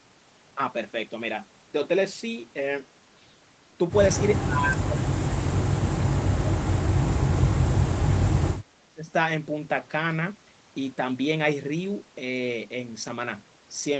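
From 4.42 to 5.66 s, 6.36 to 8.12 s and 8.84 to 9.10 s the speech sinks by roughly 20 to 30 dB in uneven pieces, likely speech suppressed in double talk as the echo canceller ducks the near talker, not packet-loss dropouts, which are sudden and brief.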